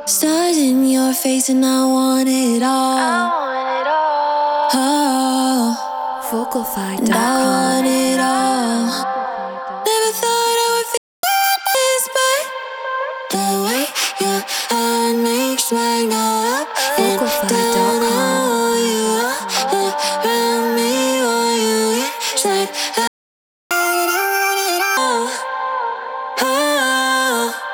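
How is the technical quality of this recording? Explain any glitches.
The recording has two clear glitches, each a dropout followed by a burst of fast, high-pitched sound.

Playback stall: the sound cuts out from 10.97 to 11.23 s (about 0.26 s) and again from 23.07 to 23.71 s (about 0.63 s), most likely because the player ran short of data or its thread was blocked. On a waveform these show as flat, empty gaps, and on a spectrogram as blank vertical bands.

Catch-up at higher speed: right after each gap, from 11.23 to 11.75 s and from 23.71 to 24.97 s, the audio runs at 1.5 times normal speed while the player works off its backlog. Resampling raises the pitch by roughly seven semitones, so the spectrogram's harmonics shift upward and events sit closer together until normal speed returns.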